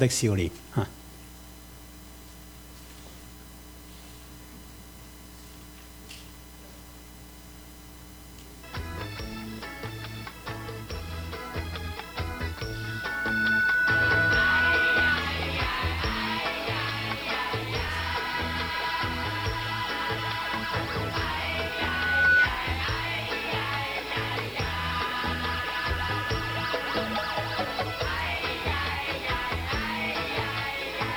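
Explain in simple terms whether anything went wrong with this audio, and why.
Something did go wrong near the end. From 21.42 to 22.49 s there is a loudspeaker feedback squeal. A microphone was picking up the speaker it was feeding. The sound went round and round that loop, growing each time. One pitch, about 1.5 kHz, won out. It swells over roughly a second into a shrill, steady whistle. By its peak it is clearly louder than everything else in the audio. Then it stops.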